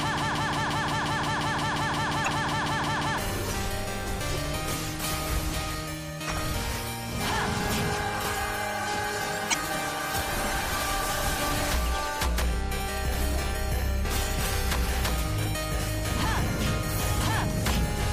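A stalled player or stream likely resent its last fragment: a broken-record loop is already under way at the start, a 0.18 s piece repeating 18 times until 3.18 s. From 2.24 to 2.28 s, 9.50 to 9.54 s and 16.55 to 16.60 s, damaged data in the compressed stream made the decoder lose sync. Throughout, the cause is likely plainly audible MP3 compression at a bitrate around 64 kbps, heard as watery, swirling treble and smeared attacks.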